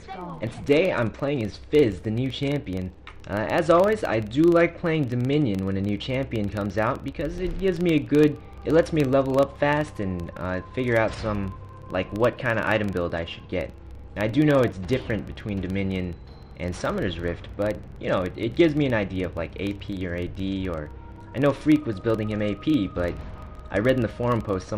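A regular ticking buzz at about 23.4 Hz runs through the whole clip and rises and falls with the level of the sound. This is a filter restarted on every block, which fits a 2048-sample block: its memory clears each time, so every block opens with a small transient.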